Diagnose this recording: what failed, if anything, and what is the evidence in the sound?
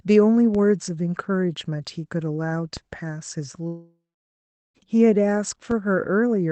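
At the converter or analogue input stage, the signal's zero line jumps abruptly at 0.55 s, 2.77 s and 5.71 s. Each DC step is heard as a brief low thump under the speech, and the offset then drains away slowly, consistent with a high-pass around 2 Hz.

In the network stage, audio stops arriving from 3.67 s to 4.78 s, a gap of about 1.1 s. The last sound is stretched into a fading buzz, then roughly 0.76 s of silence follows before speech resumes with that stretch missing. This points to a likely long network dropout, with the receiver concealing the loss until it gave up.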